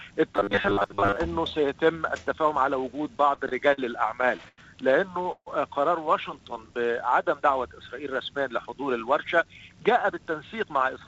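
From 0.36 to 1.16 s the audio turns into a rigid, metallic buzz at a fixed 100 Hz, the robotic sound from repeated short buffers, likely from starved playback looping the last 10 ms over most of that span. Two bursts of repeated stalls (stutter) follow, each with four gaps. From 3.22 to 3.80 s the gaps total 96 ms, the longest 43 ms. From 4.22 to 4.60 s they total 122 ms, the longest 94 ms. In both bursts the receiver stretched the last sound while late packets caught up, so the audio drags but nothing is lost. At 5.32 to 5.48 s a call audio freeze holds the sound for 146 ms, fading to about 50 ms of silence before resuming where it stopped, likely a held-up packet stream draining the jitter buffer. From 6.53 to 7.29 s a jitter buffer slow-down plays at 91% speed at unchanged pitch, repeating pitch periods to add 78 ms of reserve. From 9.24 s to the end, a jitter buffer speed-up runs at 107% with unchanged pitch, trimming roughly 150 ms to cut excess delay. 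Throughout, nothing is heard above 8 kHz, which fits a wideband call codec such as G.722 at 64 kbps.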